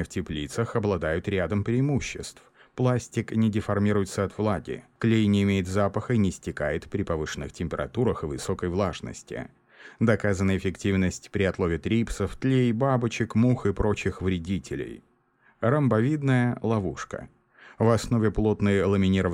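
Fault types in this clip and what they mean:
No faults can be heard.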